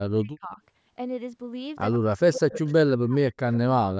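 A speech recording from a call in which the echo canceller is most likely struggling with both sides talking at once, so it turns the near talker down along with the loudspeaker echo. That speech suppressed in double talk shows up as the voice dipping sharply, by around 40 dB at its deepest, and breaking up from 0.0 to 0.61 s, 1.97 to 2.63 s, 2.84 to 3.36 s and 3.77 s to the end. The same canceller is also likely failing to remove all of the loudspeaker signal its microphone picks up, and that echo leak sends back a copy of the voice delayed by 111 ms. It comes through as brief scraps at 1.92 to 1.98 s and 3.53 to 3.58 s, about 20 dB below the speech, and as a longer, stronger stretch from 2.36 to 2.73 s at about 10 dB down. Throughout, the band stops at 8 kHz, consistent with the call's microphone processing.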